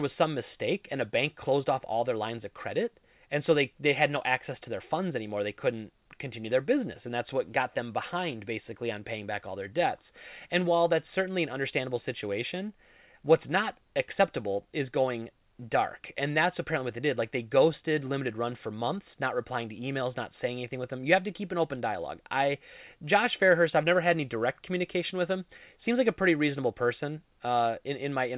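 No technical faults can be heard in this recording.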